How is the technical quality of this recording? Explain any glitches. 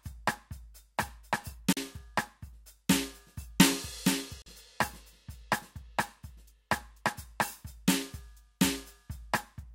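The music is interrupted twice by short gaps, each about 40 ms, at 1.73 to 1.77 s and again at 4.42 to 4.46 s. The likely cause is a Bluetooth dropout: audio packets failed to reach the headphones in time and were discarded, so the output fell silent. The gaps have abrupt edges or a fade of a few milliseconds, and the music returns further along rather than where it stopped, consistent with roughly two lost packets each time.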